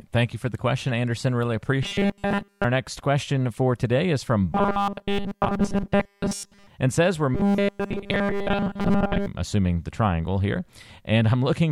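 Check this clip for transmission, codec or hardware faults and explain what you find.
One fault appears, three times. Robotic sound from repeated short buffers runs at 1.83–2.64 s, 4.53–6.67 s and 7.35–9.27 s. The speech becomes a rigid 200 Hz buzz. This is likely a 5 ms block repeating while fresh audio is skipped.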